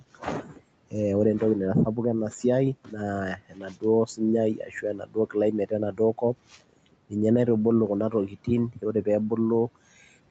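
Speech cut by the noise suppressor comes and goes through the clip, at 0.0–0.94 s, 2.84–2.96 s, 3.36–4.21 s, 4.54–7.13 s (ending just before "naitubuluu kuna") and 8.11–9.31 s (right after "naitubuluu kuna"). The suppressor mistakes quiet speech for the room noise and pulls it down by about 14 to 19 dB, deepest in the fourth span. Quiet endings and consonants sound swallowed, fading into the background. On the waveform the envelope dips, and the spectrogram shows speech energy thinning in short patches.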